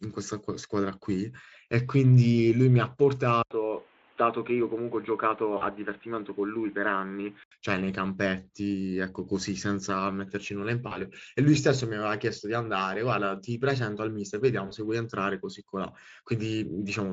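From 3.43 s to 7.52 s, after a silence of about 80 ms, the speech turns duller and about 5 dB quieter, with nothing above 3.8 kHz and a new hiss well below the voice. The input was likely switched to a poorer device.

VoIP packet loss concealed by the speech codec occurs at 5.57 s, 10.87 s and 14.67 s. Each 40 ms gap, which fits two lost 20 ms frames, is bridged by the Speex decoder with a fading extrapolation, and the speech stays weak or distorted until 5.65 s, 10.98 s and 14.75 s.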